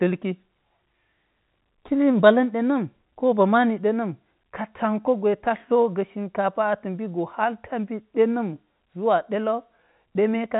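No faults can be heard anywhere in this speech. It passes through G.711 telephone coding in the A-law form, which leaves nothing above about 3.8 kHz and only a faint trace of its level-following quantisation noise.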